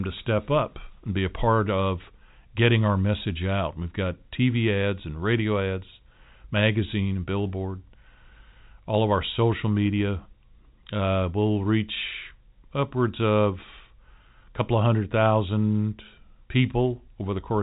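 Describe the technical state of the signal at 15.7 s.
At 15.7 s the audio is intact, with only the expected narrowband character of G.711 telephone coding, which passes nothing above 3.8 kHz.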